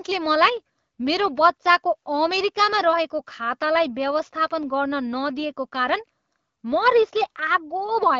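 A speech recording with no technical fault to report. It has passed through an AMR wideband (HD Voice) codec at 12.65 kbit/s, and the light coding marks and top end limited to about 7 kHz are what that codec normally leaves at this rate.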